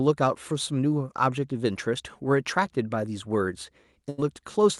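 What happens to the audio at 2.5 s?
Nothing goes wrong at 2.5 s: the speech carries straight through, with only the steady coding texture of a call path and a top end that stops around 12 kHz.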